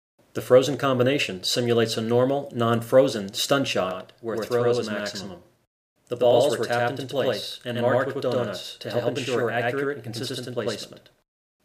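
From 3.91 s to the end, a channel delay (doubling) is present. One channel arrives 92.9 ms late and is summed to mono with the other, so each sound is followed by a distinct slap copy at equal level. The offset fits a 4096-sample buffer.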